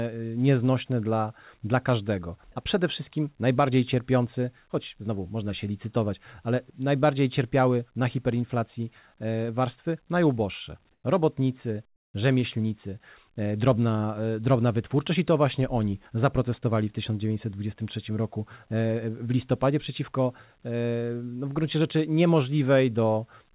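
A voice detector likely halted transmission during two pauses, so comfort noise in place of the background fills 10.92 to 11.04 s, after "warstwy najuboższe", and 11.96 to 12.14 s, after "robotnicy". The noise is smoother than the real background and about 6 dB quieter, then about 15 dB quieter.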